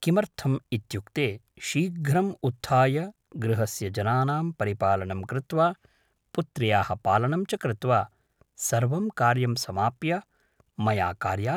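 No technical faults can be heard anywhere in the recorded speech, with the signal holding steady and continuous throughout.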